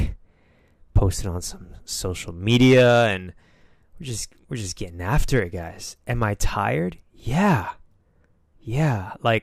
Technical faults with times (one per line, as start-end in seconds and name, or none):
0.97-1.03 hard clipping
2.49-3.09 hard clipping
5.13-5.38 hard clipping
6.22 hard clipping